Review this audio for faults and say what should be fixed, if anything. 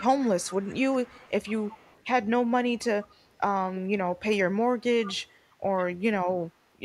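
A faint, delayed copy of the speech trails the talker by about 140 ms, clearest from 0.00 to 2.04 s and again from 5.05 to 5.35 s and 5.77 to 5.85 s, where it sits only around 15 to 20 dB down. Fainter scraps, around 35 dB down, follow at 3.03 to 3.38 s and 4.80 to 4.85 s. This is echo leak, likely from a far-end loudspeaker whose echo canceller let part of the returned speech through. Fix it by improving echo cancellation at that end, or by switching it to a headset.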